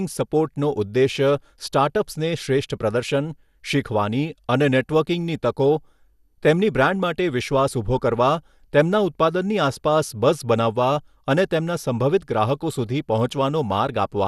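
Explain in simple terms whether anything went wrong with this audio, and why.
Yes, something's off, and it runs through the whole recording. The speech sounds dull, with nothing at all above 12.2 kHz, and there's a gurgly, grainy edge that's easy to hear. That's likely MP2 compression squeezed too hard. The format splits sound into narrow slices and, when short of space, simply switches off the top slices and rounds the rest roughly. That's why it sounds like low-quality digital radio.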